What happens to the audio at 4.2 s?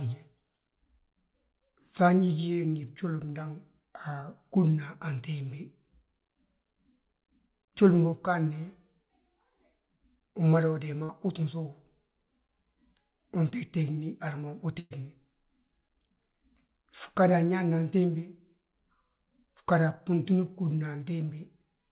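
At 4.20 to 4.23 s, about 20 ms of the call's audio arrived too late for the decoder, a short concealed packet loss. The receiver covered about 13 ms of the gap by extending the preceding sound, its pitch if voiced or shaped noise if not, and then crossfaded back into the real signal. The result is a brief smear or wobble. Nothing is heard above 4 kHz, consistent with a G.711 mu-law call path.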